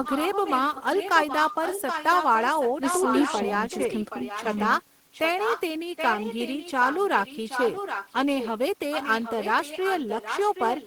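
Echo leak recurs at 0.04–3.52, 3.7–4.67, 5.13–5.21, 5.38–5.62, 5.96–8.51 and 8.91–10.86 s. A delayed copy of the speech trails 775 ms behind, often nearly as loud, faint near 5.1 s. It is likely a far-end echo canceller letting sound through. Unlike reverberation's smear, it is a distinct, separate repeat.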